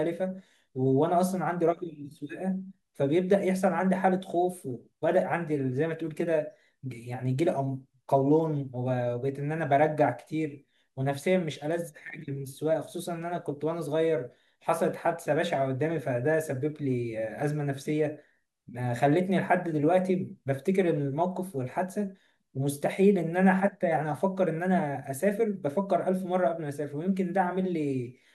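Speech recording; no technical faults detected anywhere in the clip.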